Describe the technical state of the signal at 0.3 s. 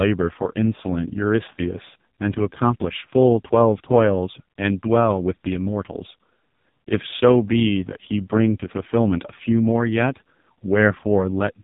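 At 0.3 s the speech carries the AMR narrowband mobile codec, present throughout. Nothing passes above 3.8 kHz, and the heavy, buzzy, synthetic rasp points to AMR-NB's lowest mode, around 4.75 kbps. Unlike a plain low-pass filter, the voice is rebuilt from a vocal-tract model driven by sparse pulses.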